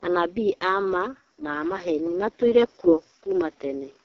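From start to finish the speech goes through an AMR wideband (HD Voice) codec, sounding rough and raspy with nothing above 7.5 kHz, which fits AMR-WB's lowest rate, 6.6 kbit/s.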